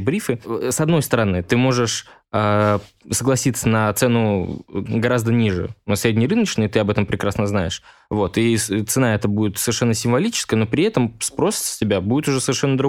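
Nothing technically wrong turns up anywhere in this speech recording, so there are no times or causes to point to.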